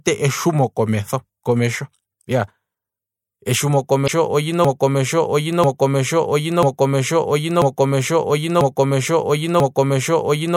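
At 4.04 to 4.09 s the speech breaks up briefly. This is damaged data in a compressed stream. Corrupted bytes made the decoder misread the frames there. It lost sync and hunted for the next valid header.

From 4.65 s to the end, the sound turns into a broken-record loop. One fragment of about 0.99 s repeats exactly, back to back, six times. The player or stream likely stalled and kept resending its last buffer. The speech that should have followed is lost.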